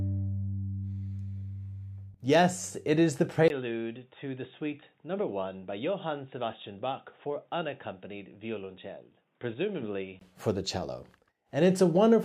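At 3.48 s there's a 20 ms gap, then the sound goes dull and boxy, noticeably quieter, with nothing above 3.8 kHz and a faint new hiss underneath. That's likely the input switched to a poorer device, and it switches back at 10.21 s.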